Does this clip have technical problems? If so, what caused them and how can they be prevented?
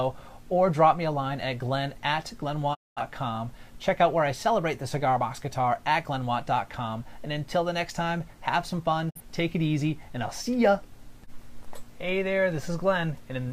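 Yes. The sound drops out twice, briefly: a quick fade of about 20 ms into silence at 2.73 s that lasts until 3.01 s, and a much shorter hole at 9.09 to 9.21 s. These are digital broadcast dropouts. The receiver lost the signal or rejected corrupted frames and muted until clean data returned, so that stretch of the programme is gone. The gap lengths fit about five lost frames and then one. Prevent them by improving reception with a better antenna, placement or signal strength.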